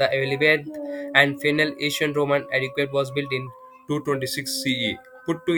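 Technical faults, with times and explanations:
3.47–5.58 s, wrong sample rate: speech slows to 0.919 speed and drops 1.47 semitones together, which fits 48 kHz audio played at 44.1 kHz without conversion.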